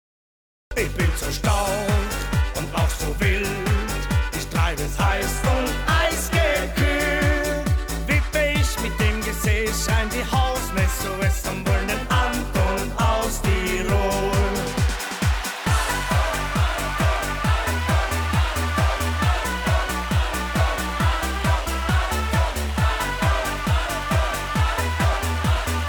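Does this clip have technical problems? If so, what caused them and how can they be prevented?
Yes. There is a cut-off start. The clip holds digital silence until 0.71 s, then the sound jumps in mid-event with no natural attack or fade-in. Capture began after the source was already sounding, so the opening of that sound was never recorded. To prevent this, arm and start the recording, or add a short pre-roll buffer, before the source begins.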